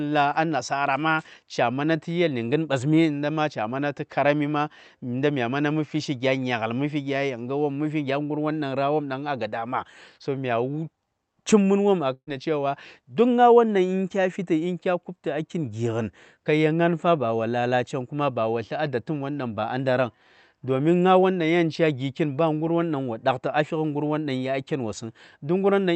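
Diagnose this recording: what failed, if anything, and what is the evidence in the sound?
Burst of packet loss at 12.13–12.29 s, network stage: last sound extended and faded over 135 ms, resuming at "da cewa" with 140 ms missing.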